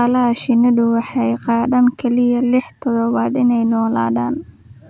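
No technical faults occur at any point in the recording, so there are none to describe in time order.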